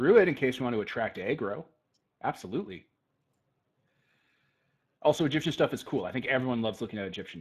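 Throughout, the speech carries Speex codec damage: starved excitation makes it plainly hoarse and noisy, fitting a roughly 22 kbps stream. A spectrogram shows nothing above 15.3 kHz.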